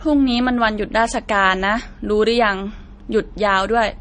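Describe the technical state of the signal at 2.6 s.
At 2.6 s the speech sounds dull, with nothing above about 9.6 kHz and two kinds of compression artefacts heard together. This runs through the whole clip, not just this moment. The likely cause is transcoding between lossy codecs, with an MP3 pass near 39 kbit/s followed by AAC-LC near 32 kbit/s. The second encoder spent its small budget re-coding the first one's artefacts, adding its own, and the low cut-off carried through.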